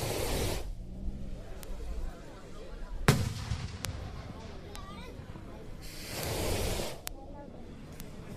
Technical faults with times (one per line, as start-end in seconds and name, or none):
1.63 bit error spike
3.85 bit error spike
4.75 bit error spike
6.23 bit error spike
7.07 bit error spike
8.00 bit error spike